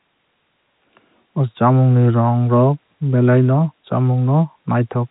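No technical faults are audible.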